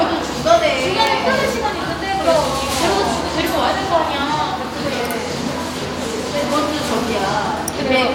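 At 6.44 s there is a tiny skip in the sound. It comes from an overlap between stream segments. Two adjacent segments claimed the same stretch of time, so the player discarded the shared part. That material was never actually duplicated, so a few milliseconds of real sound were lost. The waveform jumps across the gap. The timing fits segments about 4 seconds long.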